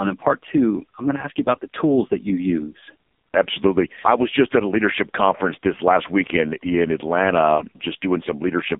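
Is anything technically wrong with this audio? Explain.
Yes. Throughout, the speech carries AMR narrowband mobile codec damage. Nothing above 3.7 kHz survives, and the 200 Hz to 3.6 kHz line band sounds buzzy and synthetic. The heavy modelling, driven by sparse pulses, fits a rate near 5 kbps. A plain telephone band-limit would sound muffled but stay clean.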